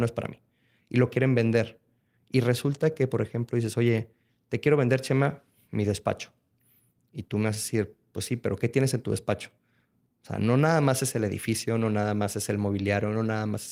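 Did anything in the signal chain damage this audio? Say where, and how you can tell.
No, nothing in the signal chain damaged this audio.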